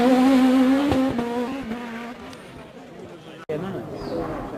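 At about 1.47 to 1.49 s there's a skip ahead. Roughly a second of audio got dropped, either lost in transit or discarded by an overflowing jitter buffer, and playback just lurches forward. The two sides butt together with no gap filled in, so it lands as an abrupt jump.

Right after, from 1.64 to 3.10 s, you get a jitter buffer speed-up. The buffer was holding more than it wanted, so the receiver kept snipping out short pitch-period chunks, around a third of a second in total. The sound runs at about 121% speed with unchanged pitch and feels rushed.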